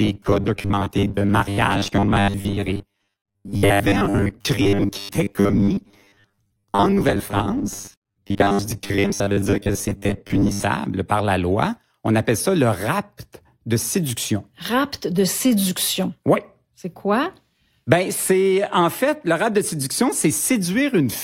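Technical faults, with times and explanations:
0.01–10.63 s, robotic sound from repeated short buffers: a rigid, metallic 100 Hz buzz until "par la loi". It likely comes from repeating 10 ms chunks that replace about half the audio.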